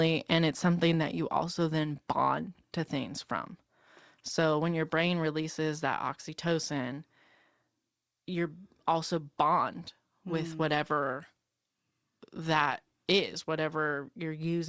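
From 10.69 to 13.48 s the speech turns thin, bright and hissy, with sibilants pushed forward: pre-emphasis left on. The treble boost applied for transmission was never undone, and the rise fits the 50 µs FM curve, aiming at about 11 dB at 10 kHz over 1 kHz. The G.722 call path stops everything above 8 kHz, so the lift shows in the upper band. Unlike a cut in the bass, the low end is not removed, only outweighed by the treble.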